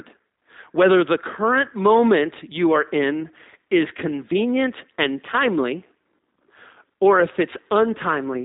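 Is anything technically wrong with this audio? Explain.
Yes. Throughout, the G.729 codec rebuilds speech from a vocal tract model and sparse pulses, consistent with about 8 kbit/s, leaving nothing above 3.8 kHz and a plainly rough, synthetic tone.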